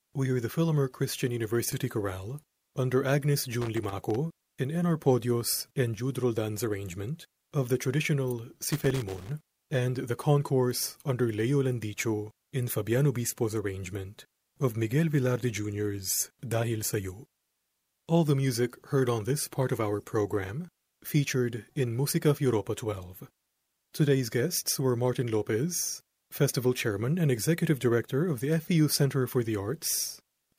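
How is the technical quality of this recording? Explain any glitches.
The recording is marred by two bursts of loose connector crackle, from 3.61 to 4.16 s and from 8.59 to 9.31 s, the second falling between "arrangement of the traditional" and "and the concourse under". A worn contact in the signal path keeps making and breaking, chopping the speech and adding pops from any DC offset. Each burst sounds like irregular scratching. The waveform shows jagged dropouts and spikes, and the spectrogram shows scattered broadband vertical streaks.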